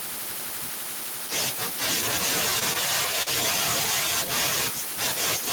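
From the start, the speech carries an echo with no canceller: the far end's loudspeaker feeds its microphone, and nothing removes the return. Each phrase is trailed roughly a third of a second later by a copy about 21 dB quieter and thinner. On a spectrogram, faint duplicate harmonic patterns lag the originals.

At 2.59 to 2.64 s and again at 3.22 to 3.30 s there is a short stall from a late packet. The jitter buffer ran dry, so the receiver held the last sound for 18 ms and then 42 ms before resuming where it left off, with nothing lost. Each stall sounds like a brief hold with a slight buzz or dip. It shows as flat, smeared horizontal bands on the spectrogram and a repeating waveform cycle.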